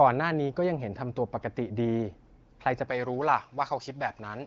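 From 2.90 s to the end, pre-emphasis was left on: the treble boost applied before transmission was never undone by its matching cut, leaving highs about 11 dB too strong at 10 kHz relative to 1 kHz. The speech turns thin, bright and sibilant.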